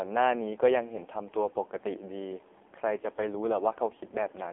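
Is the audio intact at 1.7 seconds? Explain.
No. AMR narrowband mobile codec damage runs throughout. Only 300 Hz to 3.5 kHz survives. The heavy buzzy, synthetic texture points to a low bitrate near 6 kbps.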